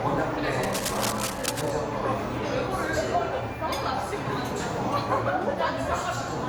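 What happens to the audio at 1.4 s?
A dense, uneven scratching and rustling sits over the sound from 0.63 to 1.71 s, only slightly quieter than the sound itself. This cable scratch noise most likely comes from a worn cable or connector being moved, its contact resistance jumping about. Beneath it, the sound is swirly, smeared and hollow, with blurred attacks. That is generation loss, likely from about four successive Opus passes at 64 kbit/s, each requantising on a shifted frame grid.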